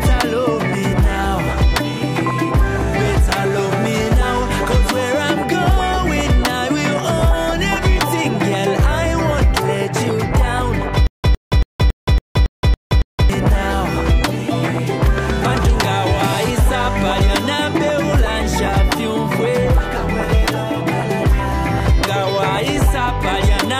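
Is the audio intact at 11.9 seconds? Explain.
No, 11.9 s falls inside a stutter with silent gaps running from 11.07 to 13.30 s. A roughly 107 ms fragment repeats eight times, each followed by about 172 ms of dead silence. That's likely a stalled stream replaying its last buffer on each retry, and the audio meant for that stretch is lost.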